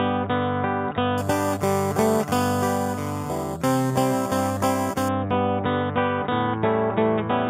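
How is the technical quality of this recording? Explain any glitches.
The recording has one clear fault, imaging from sample-and-hold upsampling, from 1.18 s to 5.09 s. The sample rate was raised by simply holding each sample, with no smoothing filter, which fits audio at 8 kHz lifted to 48 kHz. Mirrored copies of the spectrum therefore land above the original band, the first between 4 kHz and 8 kHz at about 17 dB below the signal. This is heard as a bright, metallic fizz that swells and fades with the sound.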